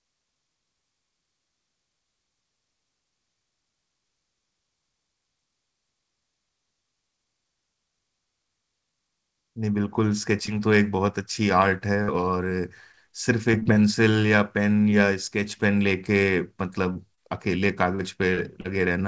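Short concealed packet loss first appears at 10.46 to 10.49 s. About 20 ms of the call arrived too late for the decoder, and the receiver bridged the hole by extending the preceding sound before blending back, leaving a brief smear or wobble in the speech.

A burst of packet loss follows at 12.03 to 12.10 s. Roughly 40 ms of consecutive audio was lost, and the receiver stretched the last sound while fading it, so a held buzz or fading hiss replaces that stretch and the speech resumes slightly further on.

Repeated packet loss (robotic sound) runs from 12.92 to 13.77 s. Five separate gaps, none longer than about 22 ms and about 100 ms in total, are each patched by continuing the previous sound. Because the gaps come in quick succession, the speech turns choppy.

Short concealed packet loss returns at 16.93, 17.15, 17.95, 18.35 and 18.61 s, each lasting 20 to 40 ms. The same continue-and-blend concealment fills every hole, producing a cluster of little smears and wobbles near the end, where a short consonant may drop out. 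Throughout the clip nothing is heard above 8 kHz, which fits a G.722 call codec on the WebRTC path.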